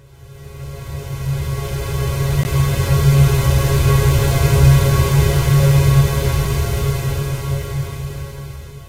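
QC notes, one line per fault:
2.43 s and 6.45 s, gap between stream segments. The sound drops to silence with hard edges, first for about 17 ms, then for about 4 ms. The two holes sit about 4 s apart, which fits a stream cut into 4-second segments. At each join the time stamps leave a small space, and the player fills it with silence. Nothing is lost. The sound resumes where it stopped, only delayed.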